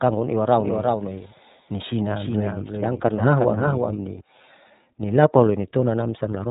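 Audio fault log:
Throughout: iLBC codec. The speech is band-limited with nothing above 3.8 kHz and has a rough, slightly synthetic grain that is plainly audible. The texture points to iLBC in its 30 ms frame mode, which fits a 13.33 kbps stream. Each frame's excitation is coded independently of the previous one, so small discontinuities at frame boundaries add roughness instead of smoothing it out. The narrowband limit removes the upper consonant detail.
0.58 to 4.20 s: doubled audio track. A second, full-band copy of the speech runs about 5 dB below the original and trails it by around 400 ms. It has no decay or room colour, so it sounds like a clean repeat, not an echo. It cuts in abruptly at 0.58 s and drops out just as sharply at 4.20 s. The likely cause is a second capture path or an edit leaving two offset copies mixed together.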